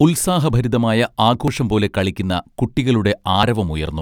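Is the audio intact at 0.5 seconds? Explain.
No. At 0.5 s there is audio missing between chunks: a brief skip where roughly 20 ms of speech is gone and the two sides are butted together with no gap of silence. The likely cause is a recorder or processor handling audio in 1.0 s chunks and dropping a sliver at the handover. On a waveform the envelope jumps abruptly at the join. A spectrogram shows a vertical seam where harmonic traces break and resume misaligned.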